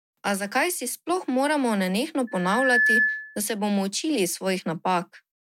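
At 2.27 s a loudspeaker feedback squeal begins. The microphone is picking up the loudspeaker it feeds, and at 1.7 kHz the gain around that loop exceeds one, so the tone reinforces itself on each pass. It swells from nothing over roughly half a second into a steady, piercing whistle that ends up around 5 dB louder than the speech, then stops at 3.43 s.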